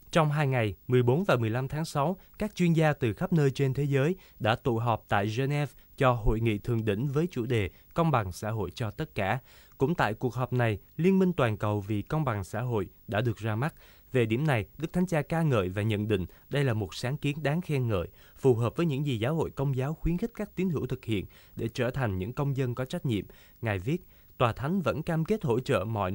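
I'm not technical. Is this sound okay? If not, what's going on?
No. Throughout the speech there is video or display buzz: a screen or video cable is leaking into the audio, adding a low 50 Hz buzz with hiss above it and a very high 15.6 kHz whine. It sits fairly quietly under the voice.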